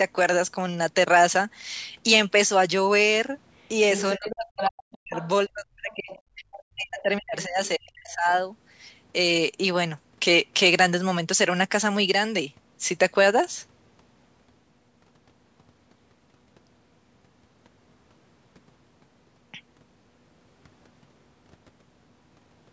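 From 3.61 to 4.7 s there's other side's voice leaking through, nearly as loud as the talker, likely a loudspeaker echo the canceller didn't fully remove. Quieter scraps follow at 5.15 to 5.29 s, then faint ones at 5.9 to 6.2 s and 6.52 to 6.63 s.

Overlapping that, from 4.17 to 5.15 s and again from 5.47 to 8.31 s, the speech is suppressed in double talk. The talker's level drops by up to roughly 40 dB in pieces, about two seconds' worth in the longer stretch, likely because the canceller turned everything down while both sides spoke.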